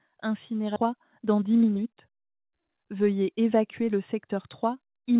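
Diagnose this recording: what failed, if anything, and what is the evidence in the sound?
At 0.76 to 0.78 s the audio jumps forward with no silence and no fill, and about a second of material is simply missing. This is a skip ahead at the network or jitter-buffer stage: audio was discarded while later audio was already queued, so the two sides of the cut are butted together. A dropout would leave a gap or concealment noise at that point. Here nothing is inserted, and the timeline just lurches ahead.

From 0.86 to 2.69 s the sound runs about 9% fast while its pitch stays put, which points to jitter buffer speed-up at the buffer stage. After the overfilled buffer was cut back, the receiver kept trimming short pitch-period-sized slices to bring the delay down further, removing about a fifth of a second in total. Resampling would raise the pitch. This stays at the same pitch and simply sounds hurried, with the 4 kHz band limit of the call path audible throughout.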